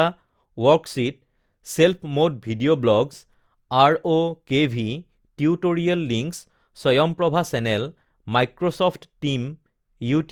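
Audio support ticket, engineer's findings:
Speech swirly and hollow throughout, consonant attacks smeared. Likely generation loss: repeated lossy re-encoding, consistent with about three passes through Opus at around 64 kbit/s, each requantising on a shifted frame grid. Spectrogram: compounding noise and smeared onsets, content to 20.2 kHz.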